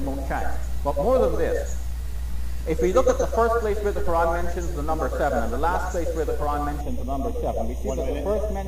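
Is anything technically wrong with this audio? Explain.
Yes. From 6.81 s to the end of the clip at 8.67 s there is channel delay (comb filtering). One channel runs late by roughly 0.3 ms, and when the two are combined into mono, the shared content cancels at evenly spaced frequencies, with the first notch around 1.5 kHz and further ones at regular intervals above it. The result is a hollow, phasey coloration with fixed notches from 6.81 s.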